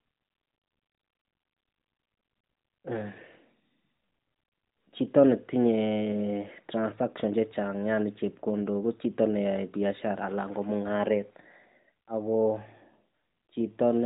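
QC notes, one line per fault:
Nothing stood out on listening to this speech clip.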